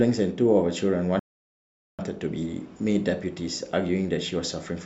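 Speech with a rebuffering stall from 1.19 s to 1.99 s: playback ran dry, went silent for about 0.79 s, then resumed exactly where it stopped, losing nothing but adding time. A waveform shows a flat gap; a spectrogram shows a clean vertical blank band.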